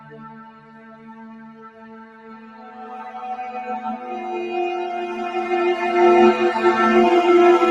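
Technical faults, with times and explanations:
Throughout, noise suppressor applied to music or sounds: the level pumps and thins as sustained parts and tails are pulled down, with swings of roughly 15 dB, while attacks pass through. A suppressor tuned for speech is treating steady, non-speech content as background noise.
0.0 to 3.1 s, sound cut by the noise suppressor: the opening sinks and its decays are clipped short, dropping by about 11 dB at the deepest point. The suppressor judged this steady, fading material to be noise and attenuated it harder than the rest. The Opus call path tops out near 12 kHz.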